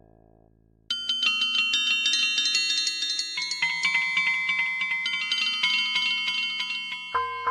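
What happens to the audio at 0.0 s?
Nothing goes wrong at 0.0 s: the music starts cleanly there, with no fault of any kind.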